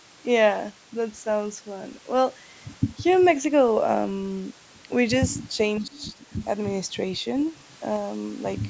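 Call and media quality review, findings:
Faint scrap of a second voice at 3.11–3.21 s, well below the talker. Other side's voice leaking through: far-end audio from the device loudspeaker reaches the mic, likely residual echo the echo canceller failed to subtract.

Talker's voice dips and thins in pieces between 5.8 and 6.33 s, falling by roughly 15 dB for about 0.4 s in total. Speech suppressed in double talk, likely the echo canceller attenuating both sides while the far end also spoke. Top end stops at 8 kHz, as expected from call mic processing.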